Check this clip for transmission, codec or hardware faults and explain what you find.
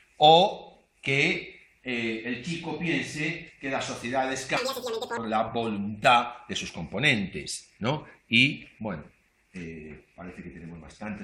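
One fault appears: audio read two samples at a time (double speed), from 4.57 to 5.17 s. The reader treats each pair of samples as a single frame, so this stretch plays twice as fast and 12 semitones higher.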